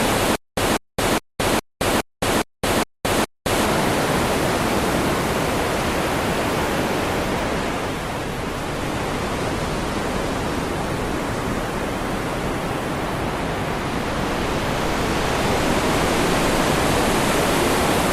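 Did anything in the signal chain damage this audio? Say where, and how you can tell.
Yes. From 0.36 to 3.66 s there is a stutter with silent gaps. The same 195 ms fragment repeats eight times, each followed by about 217 ms of digital silence, on an even 413 ms cycle. That points to a playback buffer that likely ran dry and replayed its last fragment on each retry. It differs from network packet-loss concealment because the gaps are true silence and the fragment repeats exactly, rather than smearing or fading.

From 7.3 to 14.29 s there is a call bitrate drop at the codec stage. The sound turns rough and watery and loses its top end, worst for about 5.7 s, which fits the encoder falling from roughly 48 to 13 kbps. A plain low-pass filter would muffle without the coarse texture, and this recovers when the bitrate returns.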